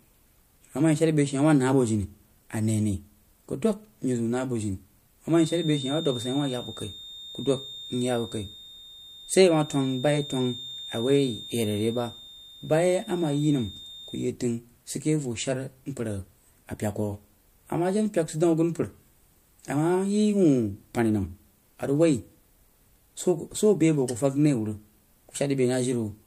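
From 5.25 s to 14.30 s a feedback whistle sits under the speech: a thin, steady 3.6 kHz tone about 15 dB down, swelling and fading slowly in level. A loudspeaker-to-microphone loop held just short of runaway is the likely cause. It ends just before "təng sid keh voh".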